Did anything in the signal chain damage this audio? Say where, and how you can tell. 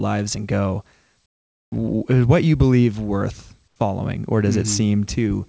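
Yes, at the call-processing stage. Between 1.26 and 1.72 s, after "and go", and again from 3.68 to 3.76 s, just before "following or", the real background gives way to comfort noise: a steady, featureless noise about 14 dB and about 4 dB quieter respectively. This likely comes from discontinuous transmission. The sender's voice detector stopped sending in those pauses, and the receiver filled them with synthetic noise. The G.722 path, limited to 8 kHz, shapes everything else.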